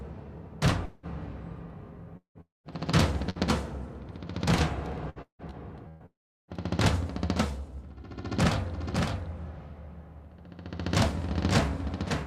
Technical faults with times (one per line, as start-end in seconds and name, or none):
0.85-1.06 long network dropout
2.17-2.67 long network dropout
3.30-3.38 burst of packet loss
5.09-6.03 repeated packet loss (robotic sound)
6.06-6.51 long network dropout
8.62-12.26 doubled audio track